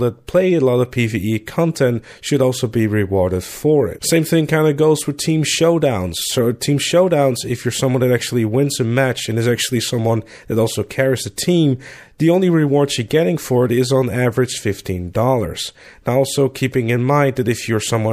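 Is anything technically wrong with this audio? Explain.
Yes. A corrupt frame decoded at 6.22 to 6.24 s: flipped bits in a single compressed frame went through the decoder unchecked, so misread codes and gains put energy at the wrong frequencies for that frame's length, producing a brief chirp-like blip peaking around -20 dBFS.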